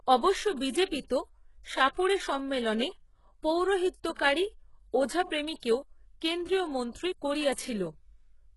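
Throughout the speech, the treble has the synthetic quality of HE-AAC compression, likely from a very low-bitrate stream, which fits something around 12 kbps. The upper band is rebuilt rather than coded, so sibilants sound gritty and metallic, with harmonics that don't continue cleanly upward. On a spectrogram, content stops hard at 11.5 kHz, and the band above the crossover looks like smeared, blocky copies of the lower harmonics under a coarse envelope.

Pre-echo appears at 1.94–1.97 s, 5.60–5.63 s and 6.92–6.95 s. In each case a sharp onset fell late in a transform block, and the quantisation noise meant for the loud attack spread back into the quiet just before it. The result is a brief hiss of about 26, 30 and 28 ms that blurs each attack. A waveform shows a noisy ramp ahead of the transient, and a spectrogram shows a broadband smudge leading the onset.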